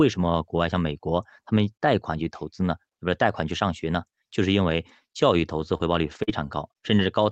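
From 5.39 to 7.05 s, twelve 20 ms lost packets are rebuilt from error correction: low-bitrate copies fill each slot, so there is no gap, only brief rough, noisy patches. At 5.77 s and 6.23 s, short concealed packet losses of about 20 ms and 40 ms differ: the receiver extends the preceding sound, giving a smear or wobble rather than grit. All of this comes through an Opus call path band-limited to 8 kHz.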